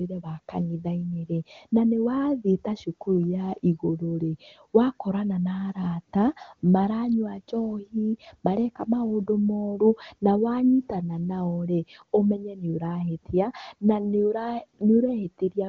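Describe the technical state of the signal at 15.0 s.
At 15.0 s the speech is intact, carried cleanly by the AMR wideband (HD Voice) codec at its top rate of 23.85 kbit/s.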